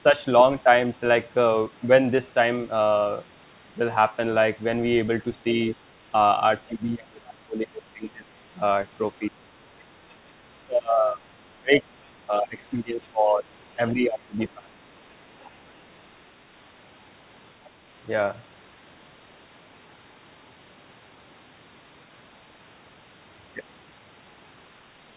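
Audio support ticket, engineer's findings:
Speech suppressed in double talk: talker dips 6.67–8.3, 9.19–9.76, 10.47–11.21, 11.5–11.85, 12.27–13.45, 13.77–14.79 s, drops about 15–30 dB. Likely echo canceller unable to separate near talker from loudspeaker echo, attenuating both.

Other side's voice leaking through: brief far-end scraps at 15.4–15.49 s (about 30 dB below talker) and 17.64–17.69 s (about 35 dB below). Likely residual echo: canceller not fully removing loudspeaker playback from mic signal. Narrowband path, nothing above 4 kHz, consistent with G.711 mu-law.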